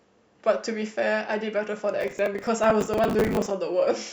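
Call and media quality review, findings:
Processor overload crackle, 2.01–3.51 s. Gritty tearing over the speech. CPU missing dozens of deadlines, consistent with buffers near 10 ms. Each gap is filled with hard-edged stale audio.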